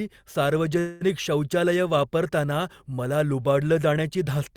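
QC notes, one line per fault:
0.79–1.03 s, call audio freeze: sound continues as a fading buzz for 215 ms, then resumes exactly where it stopped, with nothing lost as in a dropout, likely from an emptied jitter buffer.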